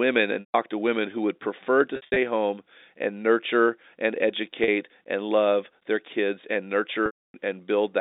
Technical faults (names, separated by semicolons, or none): packet loss with pitch repetition